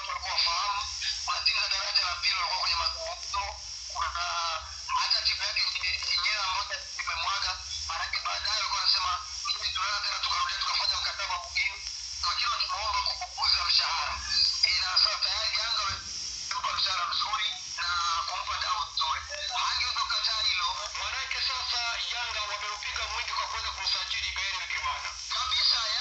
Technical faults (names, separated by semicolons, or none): none